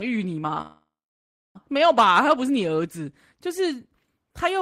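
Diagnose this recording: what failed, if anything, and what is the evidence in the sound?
Network call audio freeze, likely stalled packets draining the jitter buffer: from 0.61 to 1.57 s the sound fades into silence, then resumes intact.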